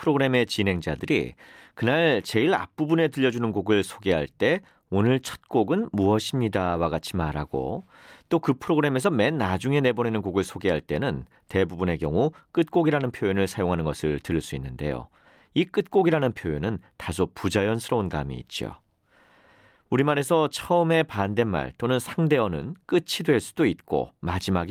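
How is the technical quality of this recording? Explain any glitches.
No technical glitches are audible.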